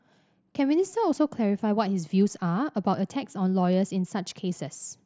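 No faults are present in the speech; the Bluetooth mSBC headset path is heard as a wideband channel topping out around 8 kHz, with the light graininess on louder passages that comes with that codec.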